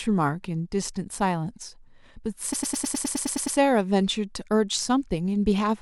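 From 2.52 to 3.57 s, repeated frames: a 104.5 ms block of compressed speech, consistent with four frames, was written out again and replayed ten extra times. The result is a rapid mechanical stutter that stretches the clip by about 1.04 s.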